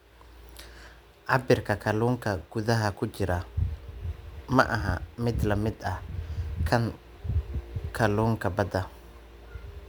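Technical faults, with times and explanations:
throughout, sample clock jitter: a faint hiss and grainy roughness ride on the speech, growing on loud and high-frequency moments and vanishing in pauses, because the converter clock wanders by a few microseconds and steep waveform slopes turn that timing error into noise roughly 35 dB down.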